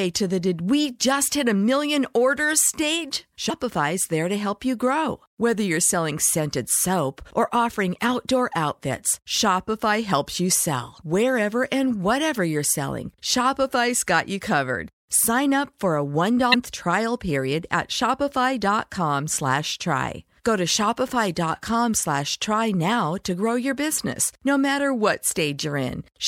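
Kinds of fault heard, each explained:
Damaged data in a compressed stream: corrupted bytes in the encoded speech made the decoder misread frames and lose sync, leaving short garbled bursts of about 45 ms at 3.46 s, after "a million orders stage", and at 16.50 s, after "up for a".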